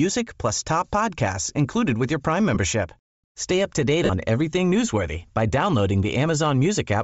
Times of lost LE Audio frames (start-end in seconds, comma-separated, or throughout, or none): 2.55, 4.05-4.10